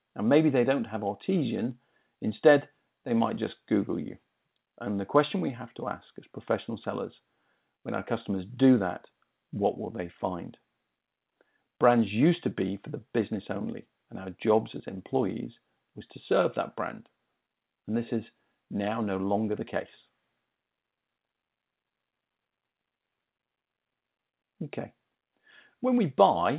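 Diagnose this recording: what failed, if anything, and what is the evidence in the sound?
Nothing failed here: the audio carries the ordinary character of a WebRTC call path running G.711 mu-law at 64 kbps, with the band ending at about 4 kHz as that narrowband codec dictates, and no dropout, glitch or distortion stands out anywhere in the recording.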